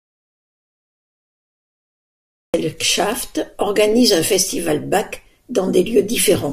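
The input was cut off before the clip begins, most likely through a lost connection or an accidental mute, while the recorder kept writing empty samples. The result is an audio dropout to silence that is already in progress when the clip begins and runs until about 2.54 s. For that stretch there is silence, with no room tone or hiss. Speech then cuts in abruptly mid-flow, and whatever was said during the gap is lost.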